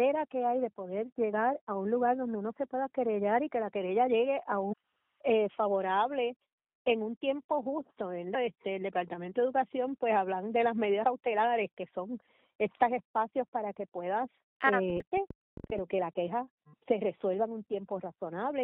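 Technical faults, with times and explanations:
1.33, 4.72–4.74, 8.34, 11.03 and 15.00–15.02 s, damaged data in a compressed stream: short blips where the decoder hits corrupted frames, loses sync and hunts for the next header.
14.90–15.79 s, train of clicks: about 15 uneven ticks at roughly 9 per second, peaking about 5 dB above the sound, likely interference or a faulty connection.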